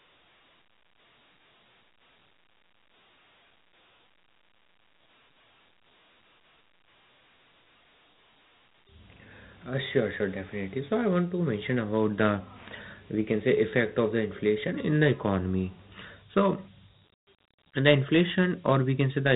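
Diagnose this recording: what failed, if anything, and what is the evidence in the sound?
The codec stage failed. The whole recording carries Dialogic VOX ADPCM damage, and it is plainly audible. Nothing is heard above 3.9 kHz. A gritty hiss rides on the speech throughout. The rate of 32 kbps fits 4-bit samples at 8,000 per second. Each sample stores only a coarse step from a running prediction. That step error becomes the grainy noise, and the low sample rate sets the band edge.

A loudspeaker feedback squeal occupies the acoustic path from 10.76 to 11.50 s. A single tone at 4.6 kHz swells over about half a second and settles around 10 dB above the speech. A microphone was hearing its own loudspeaker. At that frequency the loop gain passed one, so the tone kept feeding itself until it stopped at 11.50 s. The tone sits above the codec's 3.9 kHz limit, so it entered after encoding.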